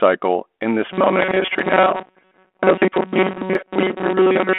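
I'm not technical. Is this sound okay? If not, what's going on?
No. The speech has three problems.

Audio missing between chunks, at 0.61, 1.59 and 3.55 s: each time a tiny slice of sound, about 20 ms, vanishes, and the two sides are butted straight together. It is likely caused by the recording being handled in one-second blocks, with a little lost at each changeover.

Robotic sound from repeated short buffers, from 0.91 s to the end: the speech turns into a stiff, metallic buzz near 188 Hz. It is likely because new sound arrived too slowly and the software kept replaying a very short snippet, roughly 5 ms long, to fill the gaps. That skips most of the real speech.

Bit errors on an ADPCM link, from 1.22 to 1.36 s: a few corrupted pieces of data on the cordless-phone-style link cause pops and rough bursts. The decoder is thrown off by each error, so the disturbance rings on briefly instead of ending instantly.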